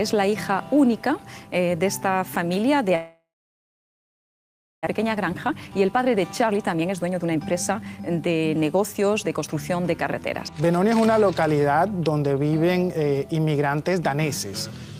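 Long network dropout, 2.95 to 4.89 s: the sound smears into a fading buzz, then about 1.6 s of silence. Likely packet loss; roughly a second never returns. Jitter buffer speed-up, 4.91 to 9.48 s: a backlog is drained by snipping pitch-period fragments, so audio runs at 119% speed, same pitch, noticeably hurried.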